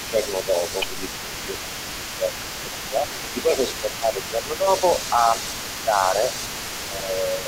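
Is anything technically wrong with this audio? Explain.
Yes. An echo leak runs from 0 to 7.48 s: a faint copy of the speech trails about 348 ms behind, roughly 15 dB down, likely from a loudspeaker's echo canceller letting pickup through.

Speech suppressed in double talk occurs at 0.1–0.52, 1.15–1.32, 2.19–2.24, 2.62–3.03 and 3.43–4.82 s. The speech dips by around 5 dB, about 10 dB in the last stretch, likely as the canceller ducked the talker along with the echo.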